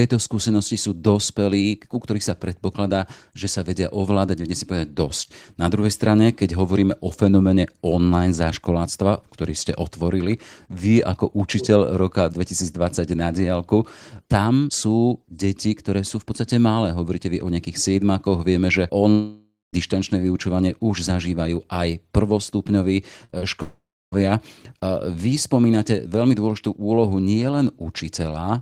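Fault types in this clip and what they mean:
Long network dropout: at 19.11 to 19.75 s and 23.62 to 24.14 s, the sound trails off into a fading continuation and then goes quiet for about 0.2 s and 0.31 s, likely because roughly 0.6 s and 0.5 s of the stream never arrived. The audio resumes without the lost stretch.
Short concealed packet loss: at 23.25, 23.30 and 23.38 s, gaps of about 40, 20 and 20 ms were patched by extending the preceding sound and blending back in. This produces a quick cluster of smears and wobbles just before the second dropout.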